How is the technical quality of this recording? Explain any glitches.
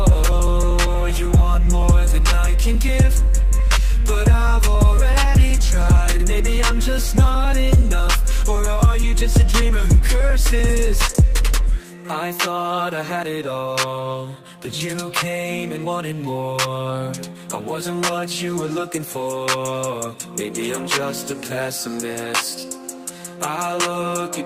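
The recording has a timing problem that runs through the whole clip: the two ends of the link disagree about clock speed, and the receiver keeps correcting for it.

Clock drift between sender and receiver affects the entire clip. The sender's audio clock runs about 4 percent fast relative to the receiver's, so the jitter buffer keeps filling faster than it is emptied. The result is small timing hiccups recurring throughout, at uneven intervals.

Repeated timing corrections run from 0.10 s to 24.29 s. To keep the filling buffer in check, the receiver repeatedly cuts short pieces out of the sound, always in the same direction and unevenly spaced, to play at 104 percent speed. Each cut is small and can be heard as a hiccup or an unsteady tempo.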